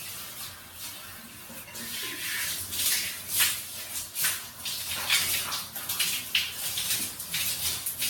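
From start to finish the sound carries generation loss. It is swirly, hollow and smeared, with blurred attacks and nothing above 17 kHz, likely from around ten successive lossy re-encodes, consistent with AAC-LC near 96 kbit/s, each pass adding fresh quantisation noise and spectral holes.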